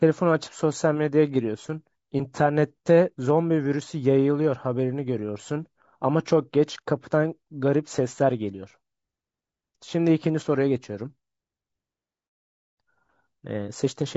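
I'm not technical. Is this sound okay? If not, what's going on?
No. The speech sounds rough and grainy throughout, with a hazy top end, likely from low-delay AAC compression squeezing the voice into too little data.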